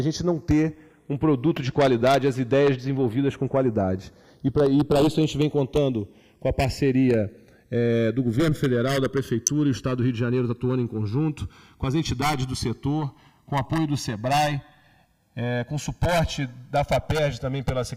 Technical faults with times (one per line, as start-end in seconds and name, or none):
0.00-17.97 channels drifting apart
1.57 electrical switching spike
9.47 electrical switching spike